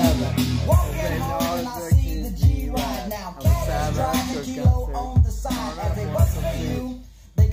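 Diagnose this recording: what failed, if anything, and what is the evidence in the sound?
Nothing failed: no stage from capture through to playback leaves an audible trace in the sound, so there is no evidence to report.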